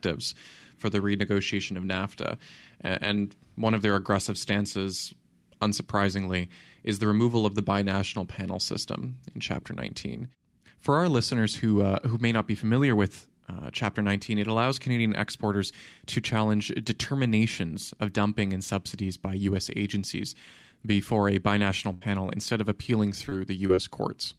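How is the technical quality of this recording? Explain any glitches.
The recording, which is speech, has four packet-loss glitches, all in the last three seconds.

At 21.93 s, after "agencies before a binational" and before "instead of appealing", there is a burst of packet loss lasting about 0.1 s. The receiver kept the last sound going and faded it for roughly 77 ms, so it comes across as a held, decaying tail. Then the audio picks up again with about 80 ms of content gone.

Short concealed packet loss happens at 23.29 s, 23.67 s and 23.75 s, each about 40 ms long, with the first two coming after "instead of appealing". At each point about 20 ms of audio was synthesised from the preceding sound and blended back into the signal, so you hear a brief smear or wobble.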